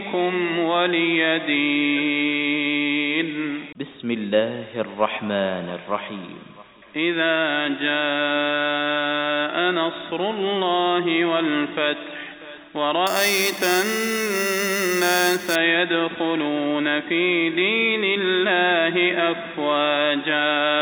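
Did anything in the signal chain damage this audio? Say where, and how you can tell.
Yes. From 13.07 to 15.55 s, imaging from sample-and-hold upsampling (8 kHz to 48 kHz, no smoothing filter) adds a metallic fizz about 9 dB below the signal. A spectrogram shows a mirrored copy in the 4 to 8 kHz band whose contours move opposite to the pitch.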